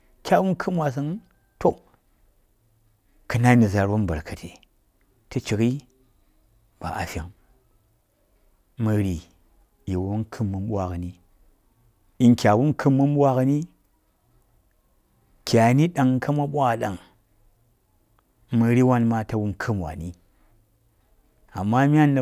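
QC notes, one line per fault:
No faults heard in this speech recording.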